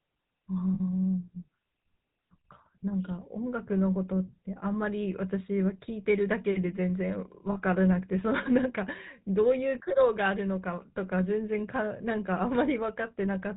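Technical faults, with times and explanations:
Throughout: GSM full-rate codec. The vocal tract is modelled and driven by sparse regular pulses, with nothing kept above 4 kHz, which gives the speech a plainly buzzy, gravelly roughness.
0.74–0.81 s and 7.52–7.57 s: lost GSM frames. Missing frames, about 60 ms then 40 ms, were filled by repeating the last good frame, giving a brief rough, metallic ring.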